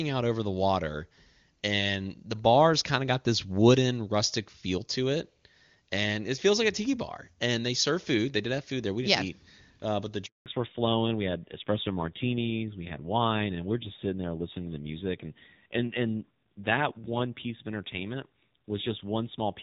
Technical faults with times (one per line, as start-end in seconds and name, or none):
10.26-10.46 handover gap
10.46-19.63 fallback to narrowband